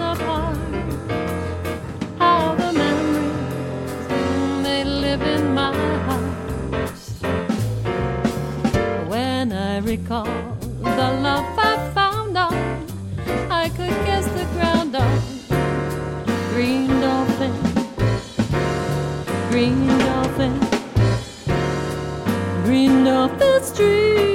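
No faults are audible anywhere in the recording.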